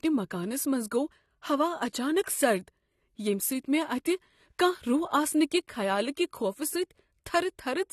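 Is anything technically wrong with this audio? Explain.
Yes, this speech carries compression damage throughout. The dull, smeared sound with a warbling, fizzy edge on sibilants is likely AAC compression, consistent with AAC-LC at around 32 kbps. Coarse quantisation of each frame's spectrum causes this. A spectrogram would show a hard ceiling at 13 kHz with patchy holes below it.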